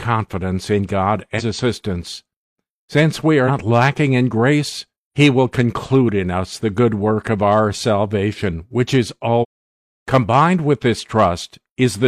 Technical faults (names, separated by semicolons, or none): damaged data in a compressed stream